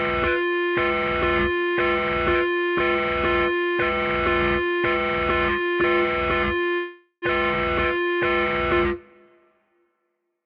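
From 6.73 to 7.25 s the everyday sound stalls in a call audio freeze: the last sound carries on as a fading buzz or hiss for about 485 ms, then briefly goes silent, likely from packets held up until the jitter buffer ran empty. Unlike a dropout, nothing is lost; the audio resumes where it stopped, about half a second late.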